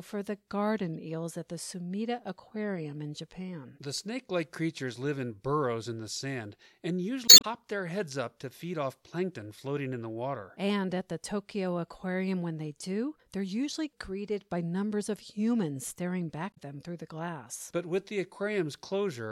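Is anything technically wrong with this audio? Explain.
Yes. There is damaged data in a compressed stream at 0.93–0.96 s, 7.25–7.45 s and 16.50–16.58 s of this speech. Corrupted bytes there make the decoder misread frames, lose sync and hunt for the next valid header, which produces a brief chirp, squawk, click or short hole. Unlike a dropout, which leaves silence or a smoothed gap, or a simple click, which is a single sharp tick, these bursts come from the decoder misreading the stream itself.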